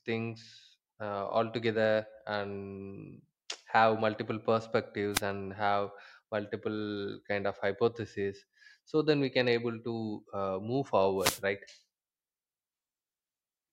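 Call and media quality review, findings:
Wireless microphone noise hit, speech. Analogue FM radio link fading as reflected paths cancel at the receiver; receiver noise rises, breaks into static. Probable component: wireless mic transmitter/receiver RF path.
5.13–5.21 s: brief swish of static, about 80 ms.
11.18–11.41 s, just after "uh move": longer burst of static, about 230 ms.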